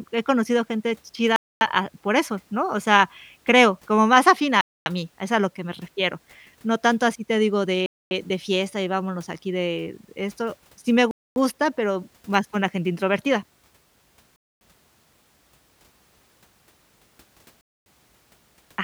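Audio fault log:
1.36, 4.61, 7.86, 11.11, 14.36 and 17.61 s: gap between chunks. The speech stops dead for 250 ms each time. The holes recur every 3.25 s, which fits 3-second chunks played with a fixed delay before each starts. Nothing is lost; the flow just breaks at each join, as between "tanto así te digo" and "de fiesta y vámonos".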